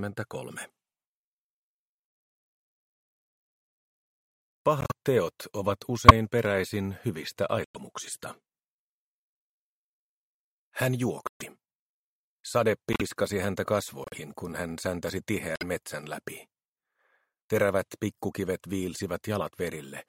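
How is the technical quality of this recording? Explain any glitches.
The recording has a recurring glitch: corrupt frames decoded at 4.81–4.92, 6.08–6.12, 7.63–7.77, 11.27–11.47, 12.93–13.02, 14.04–14.21 and 15.55–15.63 s. Damaged compressed data was decoded anyway, so misread gains and codes throw energy to wrong frequencies, giving squeaks and noise bursts lasting one to several frames. The 6.08 s one is close to full scale. Unlike a dropout, sound is added rather than lost.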